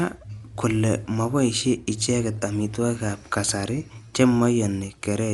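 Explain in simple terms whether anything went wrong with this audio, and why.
Something did go wrong, and it lasts the whole clip. The speech sounds dull and muffled, because nothing comes through above about 11.5 kHz. There is also a rough, fluttering hiss clinging to the voice. This is likely Dolby Digital compression set too low. To save space, the encoder dropped the highest sounds. It also threw away fine detail in many frequencies, and the player filled those gaps with noise. That noise is the roughness you hear.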